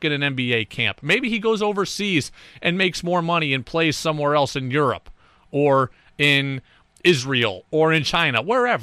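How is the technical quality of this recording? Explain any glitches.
The speech suffers from hard clipping in four short stretches: 0.53–1.14 s, 6.23–6.38 s, 7.06–7.44 s and 7.95–8.38 s. Peaks exceed the stage's ceiling by about 3 dB, or about 2 dB in the last stretch, so their tops are cut flat, producing crackly distortion on the loudest syllables.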